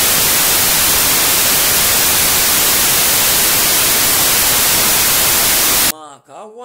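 From the very start until about 5.91 s, just before "ma ku a̱ hwa", the speech is hit by a wrong sample width problem. It sounds like 32-bit samples being read back as 16-bit ones: each original sample gets split into two mismatched halves, so you hear loud, harsh noise with the speech buried underneath. Because every sample turns into two, everything plays at half speed, dropping about an octave in pitch.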